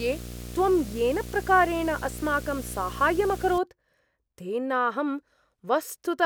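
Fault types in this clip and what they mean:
Video or display buzz: a screen or video cable couples its 60 Hz field rate into the speech path, giving a buzz with hash above it, roughly 15 dB below the speech, from 0.0 to 3.6 s. A spectrogram shows stacked 60 Hz harmonic lines; the waveform shows a 16.7 ms ripple.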